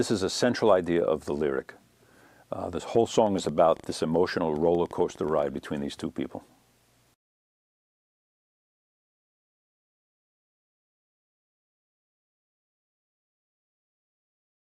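From 2.95 to 5.44 s, a train of clicks ticks over the sound at about 6.9 per second, unevenly spaced, roughly twenty in all, about as loud as the sound. The likely cause is interference, a faulty connection or a power supply. A spectrogram shows thin vertical broadband lines, and the waveform shows narrow, matching spikes.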